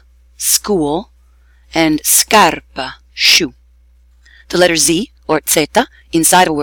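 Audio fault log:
3.28–6.63 s, time-stretched section: From 3.28 s to the end, the sound suddenly runs about 1.53 times faster while its pitch holds steady. It turns rushed. Software likely squeezed this part to fit a length, dropping short pieces to keep pitch.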